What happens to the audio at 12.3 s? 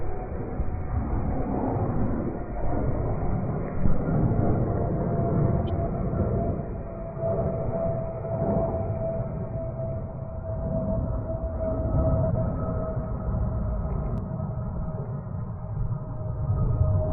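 At 12.3 s two faults overlap. A doubled audio track runs from 11.94 to 14.18 s. A second full-band copy of the sound trails the original by roughly 150 ms, at about the same level. It carries no decay or room colour. It cuts in and out abruptly at those edges. The likely cause is the same audio being captured twice through a slower path, or an edit holding two copies out of step.

Inside that span, a corrupt frame decoded from 12.30 to 12.35 s. Flipped bits in the compressed data were played rather than concealed. Misread gains and codes put energy at the wrong frequencies. The result is a short burst of noise, a chirp-like blip peaking at about -15 dBFS. Its length fits a few damaged frames in a row.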